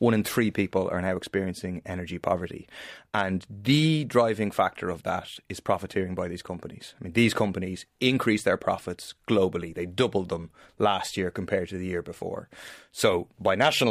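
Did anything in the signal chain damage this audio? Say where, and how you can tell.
No, nothing audible points to damage at any stage of the signal chain.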